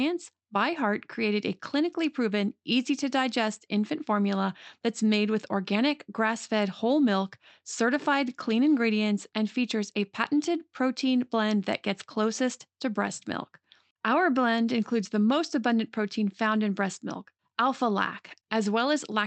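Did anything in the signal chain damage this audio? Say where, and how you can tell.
No, nothing in the chain has damaged this speech: it comes through the call path intact, with the top end stopping at about 8 kHz and the coding texture you would expect from an Opus stream at around 32 kbps, which is the normal footprint of that codec.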